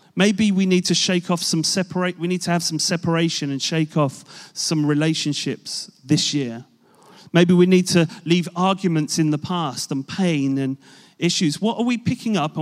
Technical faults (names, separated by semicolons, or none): none